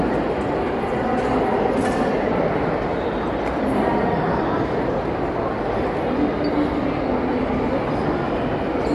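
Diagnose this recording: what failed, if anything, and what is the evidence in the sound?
The fault sits at the codec stage and runs for the whole clip. These everyday sounds carry a grainy, breathy edge, and nothing reaches above 11.5 kHz. That sound is likely Bluetooth LC3 compression. The transform coder drops the upper spectrum it cannot afford and fills gaps with shaped noise, a pattern that fits roughly 48 kbps with 10 ms frames. A spectrogram would show a hard ceiling at 11.5 kHz and speckled, blocky texture in the highs. The waveform would look unremarkable.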